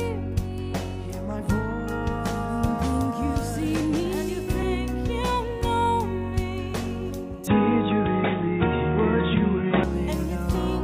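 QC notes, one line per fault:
7.47–9.84 s, input switched to a poorer device: the sound abruptly turns dull and boxy, the level shifts by around 5 dB, and a new noise floor appears well below the signal, clearing at 9.84 s. Likely a mid-recording change to a narrower-band microphone or headset profile.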